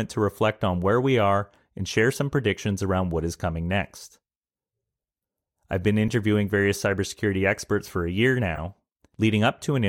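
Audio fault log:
4.08–4.15 s, 6.08 s, 8.55–8.60 s: corrupt frame decoded. Brief chirps and squeaks land just after "around what is coming", between "I've been" and "various cybersecurity experts for", and after "experts for a year", each spanning two or three damaged frames. The first is faint, peaking near -45 dBFS, while the later two are loud, near -15 and -20 dBFS. Flipped bits made the decoder apply wrong gains and codes, putting energy at misplaced frequencies. That produces pitched, frame-long junk, unlike the gap or smeared fill of a lost packet or the instant tick of a click.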